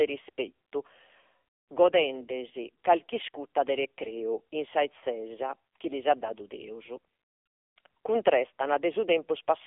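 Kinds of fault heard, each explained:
AMR narrowband mobile codec: The speech has gone through the 2G and 3G mobile speech coder. It rebuilds the voice from a vocal-tract model driven by a few pulses, frame by frame. Nothing above 3.8 kHz survives, and the line band runs from 300 Hz to 3.5 kHz, so the voice sounds thin and boxy. The damage is heavy. The voice turns buzzy and synthetic, which fits a low mode near 6.7 kbps.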